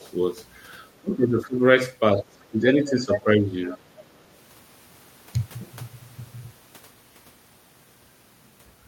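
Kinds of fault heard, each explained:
Speech suppressed in double talk: The speech dips by up to about 20 dB at 1.0–1.6 s and 2.2–3.7 s, likely from the echo canceller muting both talkers.
Other side's voice leaking through: A second voice comes through faintly near 2.4 s and 3.7–4.3 s, and loudly at 2.9–3.2 s, likely uncancelled loudspeaker echo.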